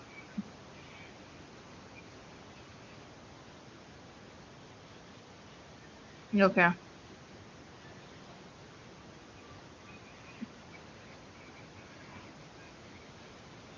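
No technical faults are present in this speech: the band stops at 8 kHz as expected from call microphone processing, the room noise sits about 29 dB below the speech, and the AMR wideband (HD Voice) coding leaves at most faint traces, which fits its highest rate of around 23.85 kbit/s.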